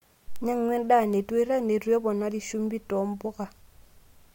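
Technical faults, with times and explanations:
0.36 s and 1.13 s, bit error spike: a single flipped bit in memory or on a digital link throws a sample or two off by a power of two before snapping back, leaving sharp, broadband ticks of about -17 dBFS and about -23 dBFS, unrelated to the speech.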